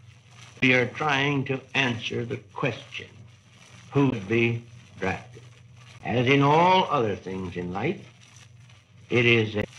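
At 0.59 s, 4.09 s, 5.97 s and 9.60 s there are brief bursts of damaged data in the compressed stream, each lasting roughly 40 to 45 ms. At each point some of the coded bytes are corrupt, so the decoder misreads or discards those frames and loses sync until it finds the next valid frame header. The result is a short, unnatural chirp, squawk, click or hole cutting into the sound at each of the four moments.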